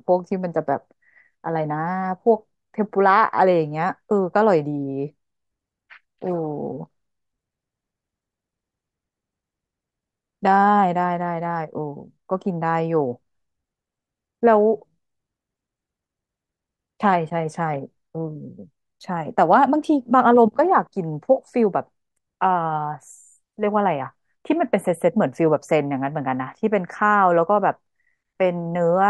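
Nothing in this recording of speech stands out as a technical fault, so there's nothing to walk through here.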